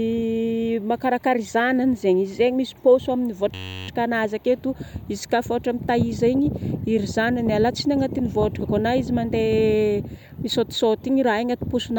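From 3.54 to 3.88 s the system froze and the hardware kept replaying one 10.67 ms slice, which fits a 512-sample buffer: a system hang loop. Repeating 32 times at 93.8 Hz, it sounds like a steady buzz before "aketo ziska", with practically nothing skipped.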